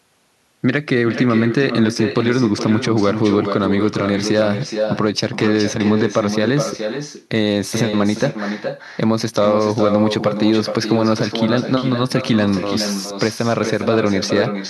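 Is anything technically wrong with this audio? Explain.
Yes. Echo with no canceller runs through the whole clip. The far end plays the speech over a loudspeaker, and its microphone sends it back uncancelled. Each phrase returns roughly 0.4 seconds later, about 7 dB quieter, as a thinner copy.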